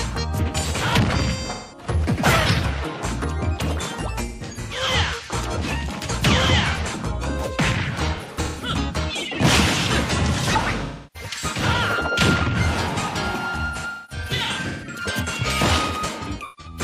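AAC frame loss with concealment at 1.5, 4.27, 8.16, 10.85, 13.66 and 16.22 s: missing frames are rebuilt from the last good spectrum, giving smeared, noisy patches, longest around 13.7 to 15.0 s.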